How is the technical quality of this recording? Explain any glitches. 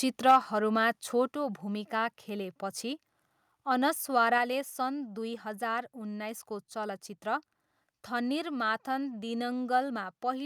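The recording has two related problems near the start: a brief burst of distortion, along with the level dropping in steps three times.

Microphone overload, 0.28 to 0.37 s: the loudest part of the speech turns harsh and crackly for about a tenth of a second. This is likely because the input gain was set high enough that peaks ran about 4 dB past the converter's ceiling, so under a tenth of the samples had their tops sheared flat. Unlike codec distortion, which smears and warbles, this is a gritty edge that appears only on the peaks.

Microphone volume stepped down, at 0.31 s, 1.32 s and 4.38 s: at each point the whole signal drops abruptly, by about 3 dB, about 4 dB and about 3 dB respectively. The background falls with the voice. That matters because a speaker moving away or speaking more softly would lower only the voice. The first step lands inside the distorted burst, which points to software that detected the clipping and pulled the device's input gain down one notch at a time.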